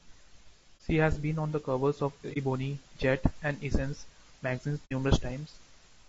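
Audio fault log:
throughout: low-delay AAC compression. The speech has a plainly audible rough, grainy texture, with noise filling the gaps between harmonics and a thin, somewhat synthetic top band. This is likely AAC-ELD coding at around 32 kbps. The codec's short frames resolve pitch harmonics poorly and spend more bits per second of audio, so at this bitrate the harmonic structure smears and the upper spectrum is rebuilt coarsely rather than coded faithfully.
0.77–0.81 s, 2.33–2.37 s (just after "on the covers of"), 4.85–4.93 s: AAC frame loss with muting. At each point the sound fades out and back in, leaving a soft-edged gap of about 30 ms at the first two times and about 60 ms at the third. That fits one lost frame, then two. The decoder zeroes the missing spectrum, and the overlapping transform windows taper the edges, so the gaps sound like dropouts.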